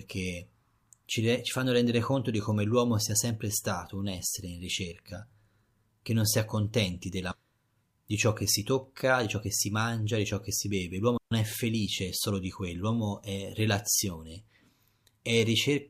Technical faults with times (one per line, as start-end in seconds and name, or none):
7.31-7.36 stream segment skipped
11.17-11.31 digital wireless dropout